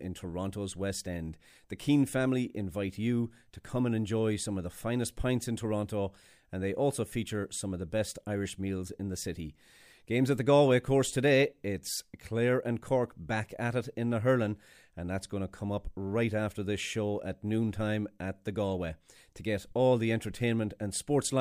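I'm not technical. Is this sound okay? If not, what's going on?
Yes, nothing in the recording's technical signal stands out as a problem from beginning to end.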